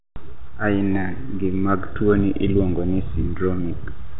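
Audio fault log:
No faults heard.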